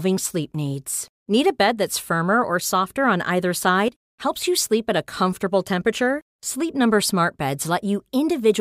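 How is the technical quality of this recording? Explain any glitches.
The recording has one clear glitch.

Sudden gain jump, 3.88 to 4.01 s: the level of the speech and the background noise drops together by about 13 dB for roughly 0.13 s, then snaps back. The likely cause is a digital gain change applied between one sample and the next without a ramp.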